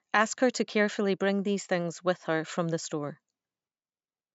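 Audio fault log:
No faults found in this speech clip; the call microphone processing behaves as expected, with its high-pass filter trimming the lowest bass.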